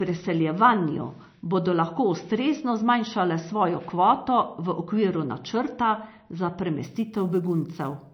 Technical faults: MP3 compression; sample clock jitter

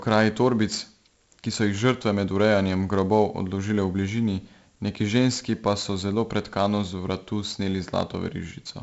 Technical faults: 4-bit ADPCM compression

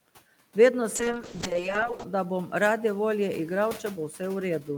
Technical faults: call bitrate drop

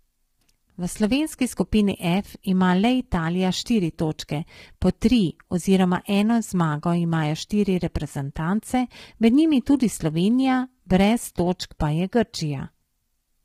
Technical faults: low-delay AAC compression

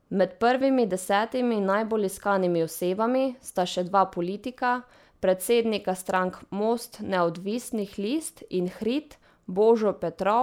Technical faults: none

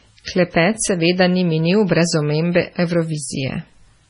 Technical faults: MP3 compression

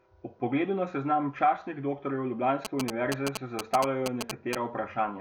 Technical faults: GSM signalling bursts

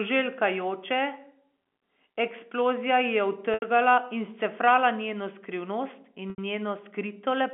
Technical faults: packet loss with pitch repetition

